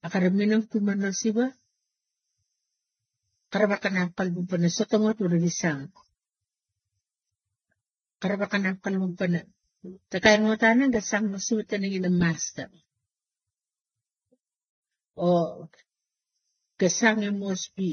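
From start to finish the speech sounds dull, with nothing above about 6.3 kHz, and carries a mix of smeared, swirly and watery artefacts. That layering points to transcoding between lossy codecs, likely low-bitrate AAC passed through HE-AAC and then Vorbis.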